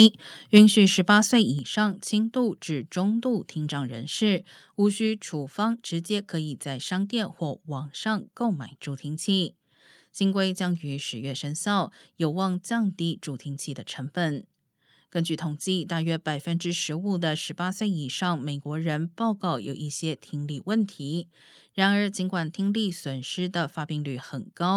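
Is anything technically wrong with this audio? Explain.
Yes. Two related problems occur in the first two seconds of this speech.

Microphone overload appears from 0.0 to 0.06 s and again from 0.56 to 0.58 s. Peaks push about 2 dB past full scale and their tops are flattened, a small share of samples at first, then roughly twice as many. The likely cause is a microphone input set too hot, driving the converter to its limit. It sounds like a harsh, crackly edge on the loudest moments. Unlike a level drop, it adds distortion rather than changing loudness.

Microphone volume stepped down occurs at 0.58 s and again at 1.59 s. Speech and background fall together, first by about 3 dB and then by about 6 dB, each time in a single clean step with no added distortion. The first step lands right after the second clipped peak, which points to call software likely reacting to the overload by cutting the device's input gain. 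A fader or fade would glide down gradually, but these are abrupt drops.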